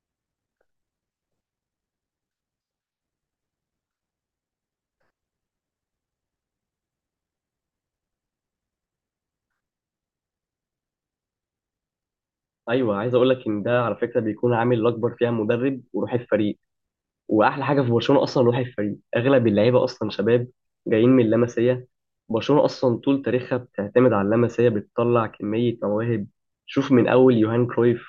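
No faults detected anywhere in this speech recording.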